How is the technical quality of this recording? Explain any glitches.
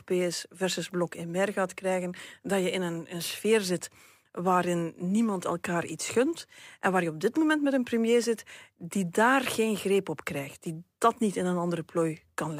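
The recording carries one fault that runs through the whole speech clip: sample clock jitter. The converter's clock wanders by something like a few microseconds, so each sample is captured slightly off its intended instant. Where the waveform changes fastest, that timing error becomes an amplitude error, here sitting at about 35 dB below the signal. It is heard as a grainy hiss riding on the speech, strongest on loud and bright passages and gone in the pauses.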